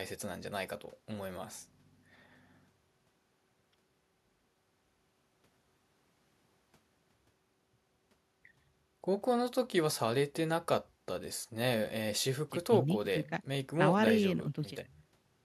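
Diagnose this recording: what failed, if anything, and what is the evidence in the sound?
Nothing failed; no fault is audible anywhere in the recording.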